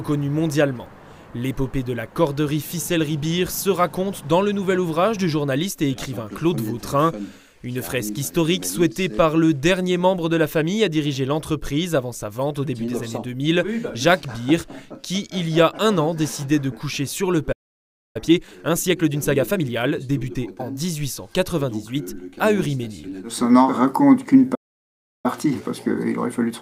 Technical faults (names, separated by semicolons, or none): playback stall; time-compressed catch-up